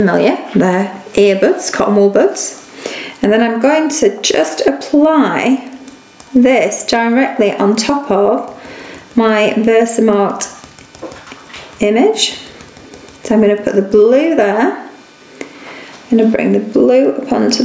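Throughout the clip, the input gain was likely set far too high, with a fast limiter or compressor clamping down on each loud sound. That causes gain pumping: the gain ducks by around 15 dB under each peak, leaving the sound squashed and flat in level, above a top end that stops at 8 kHz from the call's microphone processing.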